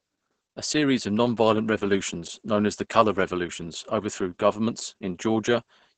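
Opus voice compression at a very low rate runs through the whole of this speech recording, and the heavy damage fits a bitrate around 10 kbps with the SILK linear-prediction coder working in wideband mode. The band stops near 8.8 kHz, so the top end is gone, and the excitation is coded so coarsely that the voice comes across muffled, hoarse and faintly robotic throughout.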